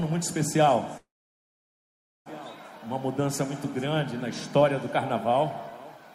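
At 0.97 s a call audio freeze begins: the last sound lingers as a fading buzz or hiss, then about 1.2 s of silence, blank on waveform and spectrogram, before the audio resumes at 2.29 s where it stopped, likely after delayed packets emptied the jitter buffer.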